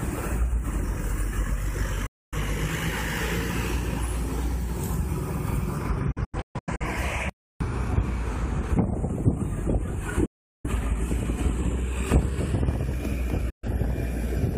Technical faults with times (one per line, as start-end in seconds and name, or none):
2.06-2.38 digital broadcast dropout
6.11-6.85 digital broadcast dropout
10.25-10.69 digital broadcast dropout
13.50-13.68 digital broadcast dropout